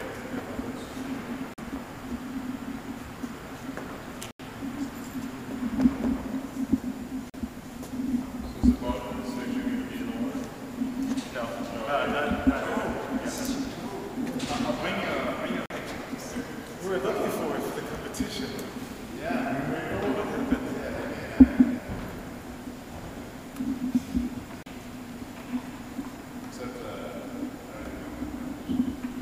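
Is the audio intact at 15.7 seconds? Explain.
No. A block of digital silence runs from 15.66 to 15.70 s, a hole of about 43 ms, which fits a 2048-sample buffer that was never filled in time and went out as zeros. Because the signal drops straight to digital silence and returns with no fade, the whole event is heard as a short, sharp dropout.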